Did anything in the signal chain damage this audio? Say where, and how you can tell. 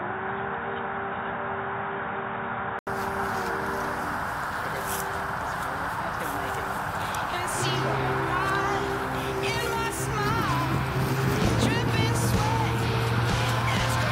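Yes. Until 2.87 s the sound is boxy, with nothing above 3.8 kHz and background noise about 35 dB down. After an 80 ms gap, full bandwidth returns at a similar level. A spectrogram shows a ceiling lifting after a blank column, likely an input switched to a poorer device at the driver stage.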